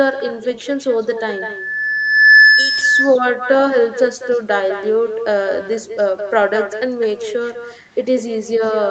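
From the first syllable to the end, every stretch of speech is trailed by a second copy arriving about a fifth of a second later, at about 3 dB below the original. This is echo with no canceller: the far end's loudspeaker output is captured by its microphone and sent back unremoved. Unlike room reverberation, which smears into a continuous tail, this repeat is a distinct, delayed restatement, thinner but almost as loud as the talker.

From 1.17 s to 2.91 s a loudspeaker feedback squeal appears. A microphone is hearing the speaker it drives, and at 1.7 kHz the loop gain tops one, so that single pitch feeds on itself. It climbs over roughly one and a half seconds to around 10 dB above the speech before it stops. A mains hum or test tone would sit at a fixed level. This one swells steadily, with the growth typical of a closed acoustic loop, all within the call's 8 kHz bandwidth.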